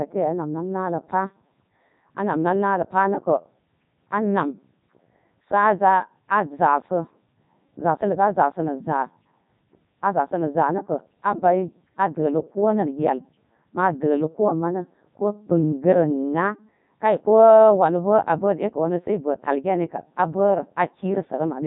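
Robotic, buzzy speech throughout, with nothing above 3.8 kHz: a Codec 2 vocoder at 3.2 kbit/s resynthesises the voice from sine waves, discarding the original waveform.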